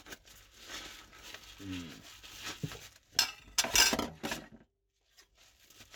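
No technical faults can be heard anywhere in these sounds; the signal stays continuous and intact throughout.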